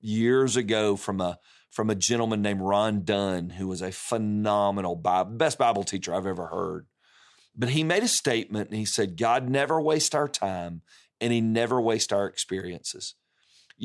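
Nothing goes wrong anywhere in the speech here, so there's no technical fault to point to at any moment.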